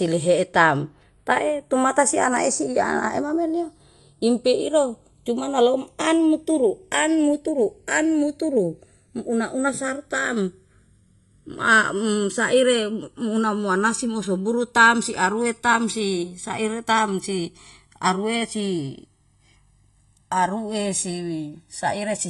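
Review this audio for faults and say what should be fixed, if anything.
Channels drifting apart runs through the whole speech clip. The two sources were recorded against separate clocks, so the time offset between them creeps steadily and reaches roughly a millisecond by the end, which fits a clock mismatch on the order of 50 ppm. Summed to mono, that sliding offset creates comb-filter notches that move slowly through the spectrum, heard as a gradual flanging sweep over the speech. To prevent it, lock both recording devices to a shared word clock, or capture both channels on a single interface.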